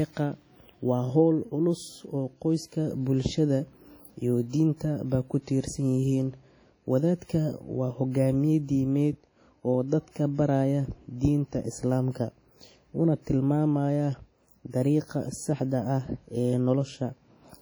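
Throughout, the speech sounds ringing and washy with breathing hiss, likely WMA compression near 32 kbps; the spectrogram shows smeared blocks and holes where weak lines vanish.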